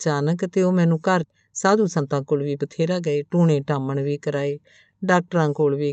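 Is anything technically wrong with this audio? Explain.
Yes, there are two faults. A skip ahead at 1.23 to 1.25 s: about 0.7 s of queued speech was dropped, so playback jumps forward and the two sides join almost directly. Jitter buffer speed-up from 1.33 to 3.40 s: to cut the excess delay, the receiver trims pitch-period slices, removing about a third of a second, so the speech runs 113% fast at unchanged pitch and sounds hurried.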